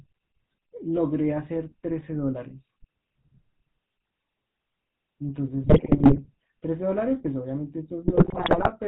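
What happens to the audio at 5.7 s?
At 5.7 s the sound falls into a burst of GSM bit errors lasting from 5.63 to 6.26 s. Corrupted filter, pitch and gain values reach the decoder, so individual frames come out with warped spectra or sudden level jumps, heard as squawks, pops and gargling. Unlike packet loss, the audio never drops to silence or a smoothed gap; it turns into wrong sound. Underneath, the GSM full-rate codec runs at 13 kbps throughout, giving a steady buzzy, gravelly roughness with nothing above 4 kHz. That constant coarseness separates it from the brief error burst.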